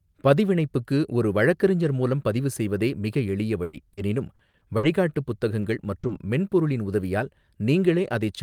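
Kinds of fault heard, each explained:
Burst of packet loss: From 3.63 to 3.75 s, roughly a tenth of a second of the speech failed to arrive in time, and the receiver covered the whole hole rather than leaving silence. It extended the last sound for about 100 ms, letting it decay as the gap lengthened, so the last sound is briefly held and fades. It then jumps ahead, with that stretch of speech gone.
Short concealed packet loss: At 3.93 s, 5.61 s, 5.99 s and 6.07 s, brief slices of audio (about 40, 20, 40 and 20 ms) never reached the decoder. Each was patched by continuing the preceding sound and cross-fading back, leaving small smears where a consonant can drop out. The last two sit right before "மென்பொருளின் உதவியால்".
Repeated packet loss (robotic sound): Between 4.35 and 4.85 s, the stream lost data four separate times in half a second. The gaps total about 180 ms, the longest 60 ms, so roughly a third of that span is synthesised rather than real. 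Because each patch barely ends before the next begins, the speech turns choppy with a robotic edge, and fragments of it are missing.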